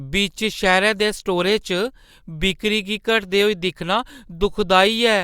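A short bit of speech, and nothing technically wrong turns up anywhere in it, so there's no fault here to point to.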